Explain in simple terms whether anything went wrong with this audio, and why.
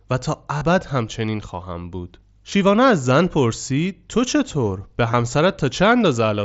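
Three brief hiccups come from concealed Bluetooth headset packet loss, at 0.58 to 0.61 s, at 2.50 s and at 5.12 s. Bits of audio went missing between headset and phone, and the phone filled each gap by replaying a matching slice of the sound just before it. Unlike a dropout, there's no silence or click, just a short buzzy smear, longest at 0.58 s, where the original sound briefly stops changing, carried over the wideband mSBC headset link.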